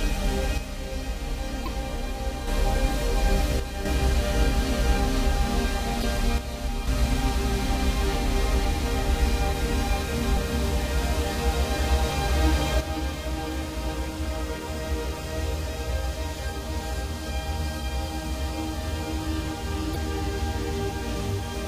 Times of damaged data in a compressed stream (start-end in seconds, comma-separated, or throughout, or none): 1.64-1.68, 6.00-6.04, 10.36, 19.92-19.96